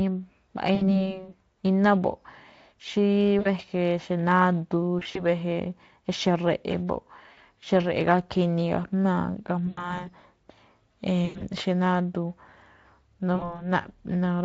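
VoIP packet loss concealed by the speech codec recurs at 0.75, 3.39, 4.99, 7.33, 9.67, 11.25 and 13.35 s: packets went missing for about 40 to 140 ms per event, and the Speex decoder, whose coding damage is light, filled each gap by repeating its last pitch and filter at falling gain. Each gap becomes a stretched buzzy tone or coloured noise that fades. The speech sounds weak or distorted past the gap, to 1.09, 5.27, 10.07 and 13.70 s.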